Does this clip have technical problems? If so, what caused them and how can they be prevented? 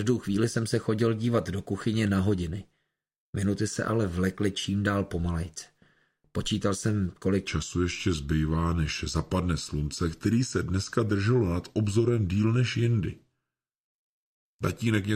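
Yes. From 7.47 s to 15.16 s, a section at the wrong speed runs at 0.84 times its original rate, so the audio slows and drops about three semitones at the same moment. The likely cause is a playback or editing stage running this portion against a mismatched clock. To prevent it, keep sample-rate and clock settings consistent across every editing, conversion and playback step, and check any spliced or retimed segments.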